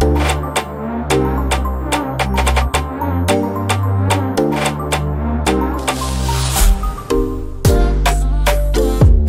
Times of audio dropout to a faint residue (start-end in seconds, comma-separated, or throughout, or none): none